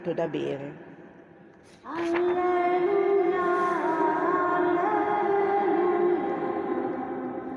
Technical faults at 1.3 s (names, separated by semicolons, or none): none